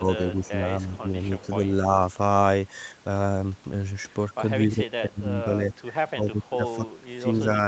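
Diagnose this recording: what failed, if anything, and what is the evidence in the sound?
Speech suppressed in double talk, in call processing: the speech dips by up to about 15 dB from 0.0 to 1.08 s and from 4.67 s to the end. The likely cause is an echo canceller ducking over overlapping talk, unlike a steady level loss.

Echo leak, also in call processing: at 0.44 to 0.49 s a faint copy, about 25 dB down, follows 262 ms late. That discrete delay, not diffuse decay, points to echo, likely escaping a loudspeaker canceller rather than room reverberation.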